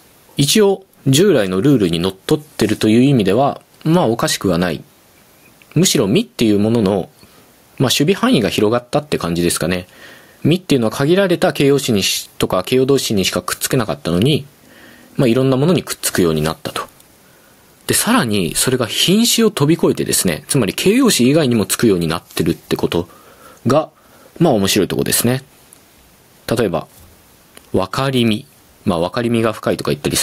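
Gain pumping runs through the whole of this speech clip, likely from input gain set far too high with a fast limiter clamping down on every loud syllable. The level swings around 15 dB, leaving levels squashed and breathing.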